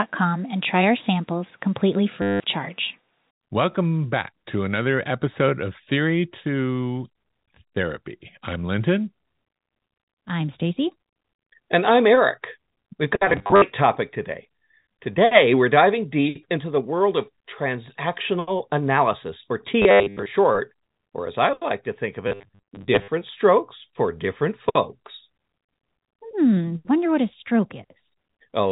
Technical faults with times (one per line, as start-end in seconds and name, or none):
2.22-2.40 packet loss with last packet repeated
13.30-13.62 packet loss with last packet repeated
19.82-20.26 packet loss with last packet repeated
22.28-23.08 packet loss with last packet repeated